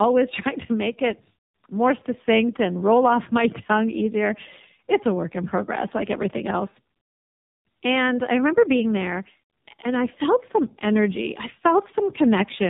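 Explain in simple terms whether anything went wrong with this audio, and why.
Throughout the clip, the speech shows tandem speech coding: two speech codecs compressed it one after the other, the second working on the first one's already damaged output. That stacks the losses, so it sounds rougher, noisier, muffled and warbly, with nothing above 3.8 kHz.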